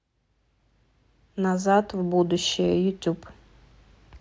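Nothing stood out on listening to this short speech recording.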